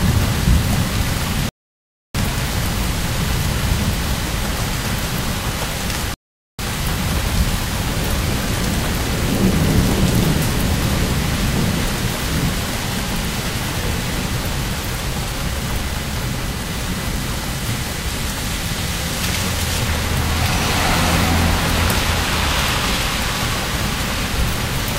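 From the start, computer activity noise runs underneath: load changes on the machine disturb the shared audio ground, giving a buzzy chirping near 1 kHz, roughly 20 dB down, visible as a horizontal line on the spectrogram. At 1.49 to 2.15 s and 6.14 to 6.59 s, rebuffering stalls cut the sound to silence for 0.66 s and 0.45 s, flat gaps in the waveform, before playback resumes exactly where it stopped.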